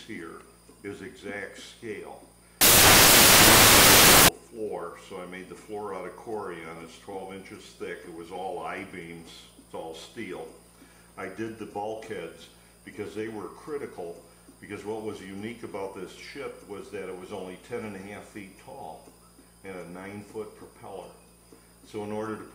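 From 2.61 to 4.28 s the audio turns into loud, harsh broadband noise. These are samples built from the wrong bytes: the reader misassembles each sample, so its rapidly fluctuating low bits become the dominant part of every value.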